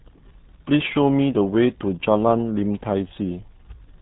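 Muffled, gargly speech runs the whole way through, with nothing above 3.9 kHz and heavy codec damage: the signature of the RealAudio 14.4 codec, a dial-up era speech coder squeezing the signal to 8 kbit/s and discarding the upper band entirely.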